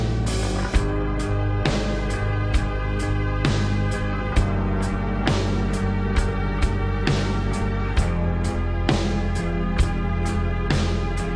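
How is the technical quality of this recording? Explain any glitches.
The recording has one fault, present throughout: a wrong sample rate. Everything plays at 0.689 times normal speed and 6.45 semitones low, which fits audio recorded at 32 kHz being played back at 22 kHz without conversion. Unlike a pitch shift or time-stretch, pitch and tempo drop together by the same ratio, with no warbling or smearing, so the sound is simply slowed, deep and sluggish.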